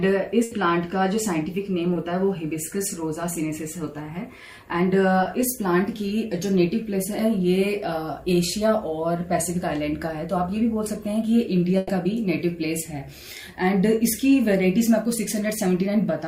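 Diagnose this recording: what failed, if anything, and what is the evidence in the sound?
Network stage: a burst of packet loss at 0.43 to 0.53 s and again at 11.77 to 11.91 s. The receiver extended the last sound for about 80 ms and 120 ms respectively, fading it as a held buzz or hiss, then resumed later, skipping that stretch of audio.

Network stage: short concealed packet loss at 1.93 to 1.97 s, 3.33 to 3.37 s and 5.23 to 5.27 s. Each dropout of about 20 ms was filled by continuing the preceding sound, then blended back, heard as a brief smear or wobble.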